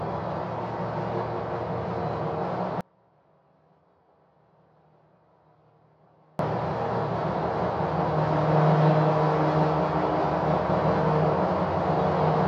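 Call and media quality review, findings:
Audio dropout to a faint residue, 2.81 s to 6.39 s: sound cuts out abruptly mid-flow for about 3.58 s, leaving only a faint leak roughly 35 dB below normal level, then returns just as suddenly. Likely an upstream break in the wanted signal while the downstream path stayed live, passing only residual leakage through.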